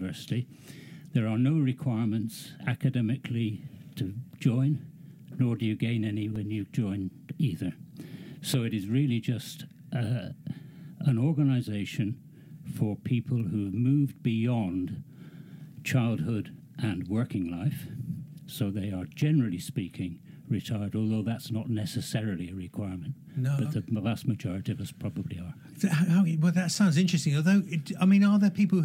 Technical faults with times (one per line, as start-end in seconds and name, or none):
6.36 block of digital silence
26.75 block of digital silence